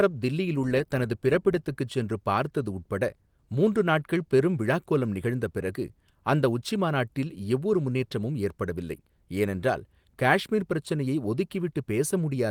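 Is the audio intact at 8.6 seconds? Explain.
Yes, the audio at 8.6 seconds is intact, with nothing there beyond the light coding damage of the 24 kbps fullband Opus voice compression that runs through the clip.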